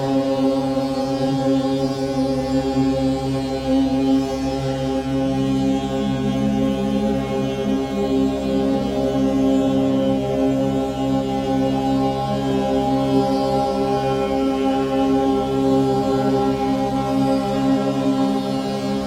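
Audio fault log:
Throughout: mains buzz, a steady raspy drone tied to the 50 Hz supply, sitting roughly 30 dB under the signal. It's not a clean 50 Hz hum. Something like a dimmer, rectifier or poorly shielded lead is letting sharp switching spikes in twice per mains cycle, and those narrow pulses spread into a dense stack of 50 Hz harmonics running up to several kHz. That upper content is what gives it the gritty, buzzy edge.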